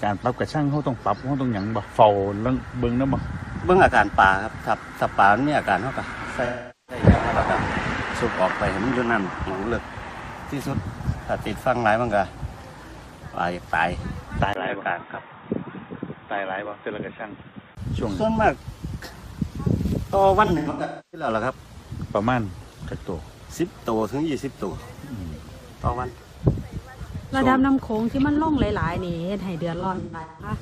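AAC frame loss with concealment first hits at 6.45–7.03 s, where around 430 ms of coded audio is missing, which fits about ten consecutive frames. The decoder rebuilds the gap from the last good spectrum, so the sound smears into a noisy, phasey patch that sags in level before recovering. A single short loss follows at 13.33–13.38 s, a brief smeared blip.

From 14.53 to 17.77 s the input likely switched to a poorer device. After a 20 ms silence at the changeover, the sound turns dull and boxy, with nothing above 3.8 kHz. It drops by roughly 5 dB and picks up a new noise floor about 40 dB down.

The frame loss returns at 20.45–21.28 s, with about 510 ms lost across 680 ms and the longest dropout near a third of a second, giving a stuttering, washed-out stretch. At 29.79–30.50 s, roughly 380 ms goes missing across 600 ms in shorter runs, heard as repeated phasey smears.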